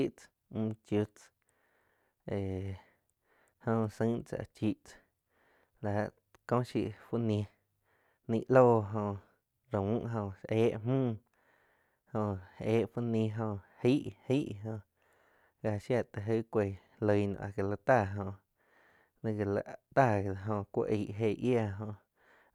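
A speech recording, with nothing technically wrong with it at any point.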